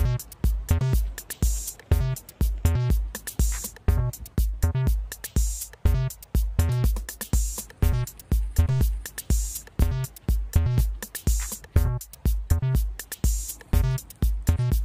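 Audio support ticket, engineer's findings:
No audible faults found on listening; signal path showed nothing to flag or attribute to any component.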